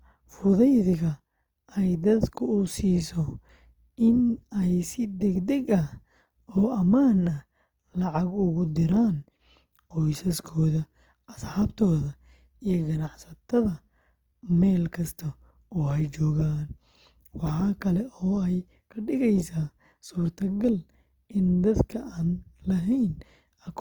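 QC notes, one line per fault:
Throughout: Opus compression, likely the cause of the plainly audible grainy, rough texture over the speech, where harmonic detail turns noisy rather than cleanly tonal. The bandwidth stays full, and there is little of MP3's swirling or watery warble. Band energies are held while missing detail is filled with folded or noise-like content, pointing to the music mode at a low bitrate around 24 kbps.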